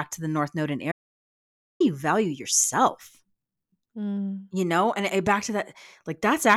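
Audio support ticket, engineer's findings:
Audio dropout to silence, 0.92 to 1.80 s. Signal cuts out after "the north node in" and returns at "you value yourself". Gap is silent, no room tone, about 0.88 s of speech lost. Likely cause: input path briefly lost (device disconnect, link failure or mute) while recorder/encoder kept writing silence. Lost content not recoverable from this file.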